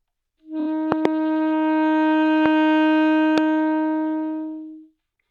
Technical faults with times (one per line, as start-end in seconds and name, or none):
0.59-0.67 repeated frames
0.92-1.07 loud pop
2.46-2.48 loud pop
3.38-3.40 loud pop